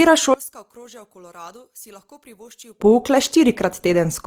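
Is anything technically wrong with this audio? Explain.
Yes, two things. Throughout, the speech has a grainy, rough, noisy texture rather than swirly holes. That's likely Opus compression in its music mode, where the encoder keeps each band's energy but fills starved bands with folded or noise content, which fits a low bitrate of around 24 kbps.

From 0.34 to 2.80 s the level collapses by about 26 dB, leaving a faint copy of the voice. The likely cause is one channel inverted: with one side's polarity flipped, the centred voice cancels when summed to mono and only the small left-right difference survives.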